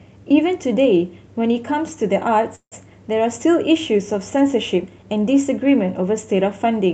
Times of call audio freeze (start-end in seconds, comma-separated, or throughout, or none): 2.55-2.74